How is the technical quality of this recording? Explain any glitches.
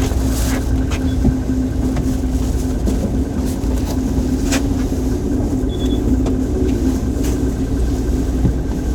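The recording shows no technical glitches, with the sound arriving intact and continuous throughout.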